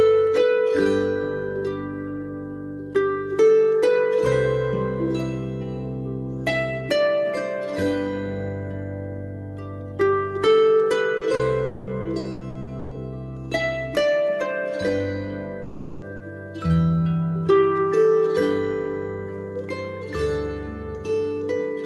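From 11.17 to 12.97 s there is repeated packet loss with a robotic sound. Eight separate holes, the longest 120 ms, together cover about 28 percent of that stretch. Each is patched by stretching the previous sound, and part of the rest came back through error correction, roughly a tenth of a second. The result is choppy and robotic. What marks this as repeated loss rather than one outage is the quick succession of short holes, each followed by a brief return of real audio.

Inside that stretch, from 11.65 to 11.90 s, the sound holds on as a smeared, fading continuation for about 220 ms before real audio resumes. This is likely a long network dropout. A second, longer one runs from 15.62 to 16.05 s, where about 400 ms is filled the same way. Neither falls into true silence. They differ from the choppy passage because a single continuous hole is extended until the decay, with no fragments of real audio breaking it up.

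At 16.02 to 16.04 s, at the very end of that second dropout, and again at 16.20 to 16.22 s, a single 20 ms packet was lost and rebuilt from error correction. The low-bitrate copy carried in the next packet was played, so there is no gap. Those frames sound grainier instead of smeared. That absence of any hole is what separates it from concealment.

From 16.16 to 16.23 s there is short concealed packet loss, with about 40 ms missing and invented from the preceding sound. It is heard as a brief wobble as the patch blends back in. Compared with the dropouts, it is far too short to decay into a buzz. The rebuilt frame at 16.20 s sits inside it. The Opus call path limits the top end to about 12 kHz and runs at roughly 64 kbps.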